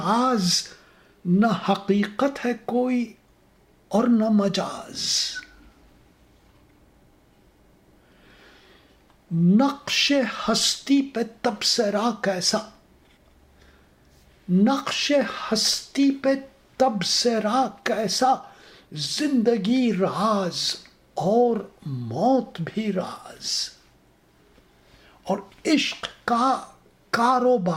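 From 17.63 to 19.35 s a call bitrate drop coarsens the audio, which fits the encoder falling from about 128 to about 26 kbps for roughly 1.7 s. It turns rough and muffled. A spectrogram shows the upper band thinning and smearing before detail returns.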